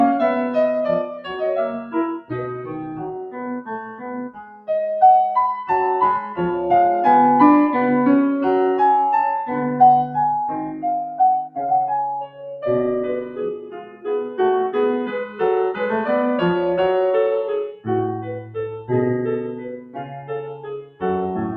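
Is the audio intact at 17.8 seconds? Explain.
No. At 17.8 seconds the music is hit by sound cut by the noise suppressor. From 17.71 to 17.89 s the suppressor mistakes part of the music for noise and pulls it down harder than the rest. The deepest drop is about 18 dB. For roughly a fifth of a second the sound sinks and thins, as if briefly swallowed, then returns.

This dip sits inside a wider fault: a noise suppressor applied to music or sounds. A processor built for speech stays active through the whole clip. It treats sustained tones and decays as noise and keeps turning them down. Its gain swings by around 10 dB. So held sound pumps and flutters, while sharp attacks mostly pass through. The cut at 17.8 seconds goes deeper than that usual swing.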